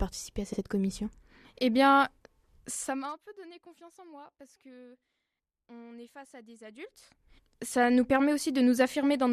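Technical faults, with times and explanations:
0.53 to 0.60 s and 2.75 to 2.81 s, repeated frames: at each point the speech stutters, with a short fragment replayed once. A 60 ms block of compressed frames was delivered twice, which fits a run of about three short codec frames, so the decoder plays the same slice again. Each repeat lengthens the clip by 60 ms.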